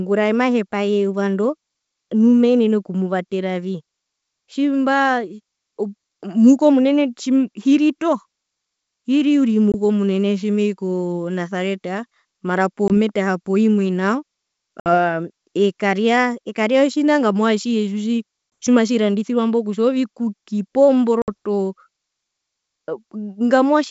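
Packet loss on an ADPCM call drops 20 ms at 9.72–9.75 s, at 12.88–12.91 s after "tjimei konasareta mara", and at 18.50–18.52 s, and about three packets (60 ms) at 14.80–14.95 s after "poimwe nao" and at 21.22–21.29 s. Each gap is filled with silence, which knocks the decoder's predictor and step size out of step with the sender's. The speech breaks off in a hard-edged hole, then returns with brief, slight distortion before settling.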